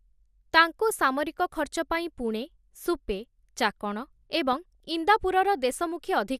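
Throughout the speech, the sound is dull and granular with a gurgling edge. The likely cause is MP2 compression at a rate that fits about 80 kbps, where starved upper sub-bands drop out and flicker. Unlike burbling, it stays steady rather than erupting.

From 4.53 to 4.80 s, just after "ପାଇଁ ପୁଣେ ସୁପେ ଚାକଣ", DAB burbling breaks out. A small fraction of bit errors slipped past error correction, so wrong samples put short blips of noise into individual sub-bands, rather than the steady dullness of compression.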